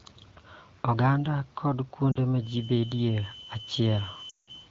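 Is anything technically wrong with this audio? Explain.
Yes. Lost AMR speech frames occur at 2.12 to 2.18 s, a 40 ms gap that fits two 20 ms frames, and again at 4.29 to 4.50 s, with a 180 ms run. The decoder repeats its last good pitch and vocal tract settings with falling gain, so the speech warbles and fades toward silence. On a waveform the envelope thins out, and on a spectrogram the harmonics smear flat.

A feedback whistle runs from 2.37 s to the end: a thin, steady 3 kHz tone about 15 dB below the speech. It is likely caused by a loudspeaker-to-microphone loop held just short of runaway. On a spectrogram it shows as one unbroken horizontal line whose brightness swells and fades slowly.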